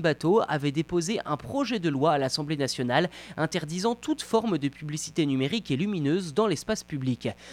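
A mains buzz runs under the speech from start to finish. Sharp switching spikes from the 60 Hz supply leak in twice per cycle. Their harmonics stack up into a steady, raspy buzz. It sits roughly 30 dB below the speech.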